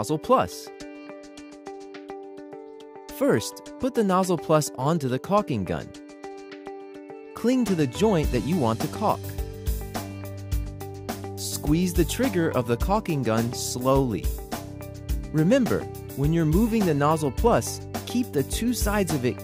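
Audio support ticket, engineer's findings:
No technical fault found on listening. No component or mechanism to report for this ticket.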